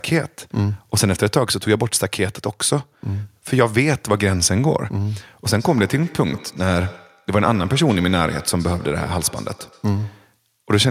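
From 5.58 s to 10.36 s there is feedback echo between two devices. A second device in the room replays the speech, and the first device's microphone sends it back. Each word returns about every tenth of a second, thinner and ringing, peaking about 19 dB below the speech.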